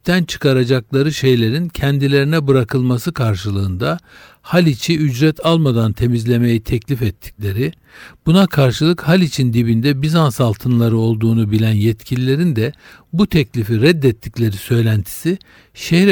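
Speech recording with no audible technical faults.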